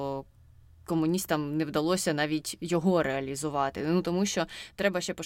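No technical faults are audible at any point in this speech recording.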